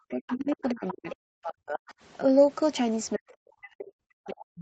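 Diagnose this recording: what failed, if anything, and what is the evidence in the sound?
Speech suppressed in double talk, in the call processing stage: from 0.07 to 1.94 s, and again from 3.16 s to the end, the speech level collapses, dipping by up to about 40 dB and breaking up over roughly a second and a half in the first span. The likely cause is the echo canceller's suppressor clamping the near-end path while both sides talk. On the waveform the envelope is carved into gaps; the spectrogram shows energy, already band-limited below 8 kHz, vanishing in patches.

Other side's voice leaking through, also in the call processing stage: at 0.29 to 0.55 s, 0.87 to 0.92 s and 1.10 to 1.15 s, a second voice surfaces about 15 dB below the main speech. It is likely loudspeaker echo that the canceller failed to subtract from the microphone signal. These bursts land inside the first suppressed span. 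On a spectrogram they appear as faint, separate harmonic traces, and in the waveform as small bursts.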